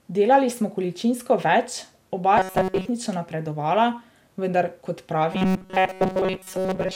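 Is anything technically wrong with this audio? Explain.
Yes, the speech has two kinds of fault.

Generation loss runs through the whole clip. It is likely the result of being encoded and decoded about five times through MP2 at 128 kbit/s. Each pass requantises the signal on a shifted frame grid, so quantisation noise and spectral gaps build up rather than staying at one pass's level. The voice sounds swirly, hollow and smeared, with consonant attacks blurred more than that bitrate alone would cause.

Robotic sound from repeated short buffers appears from 2.37 to 2.89 s, right after "smo količinsko več oba", and again from 5.33 s to the end, after "vendar kot". Fresh audio is likely arriving too rarely, so playback fills the gaps by looping a tiny slice of the last audio while most of the real signal is dropped. That slice is about 5.3 ms long and imposes a fixed 188 Hz buzz. The voice becomes a rigid, metallic drone that only loosely tracks the speech.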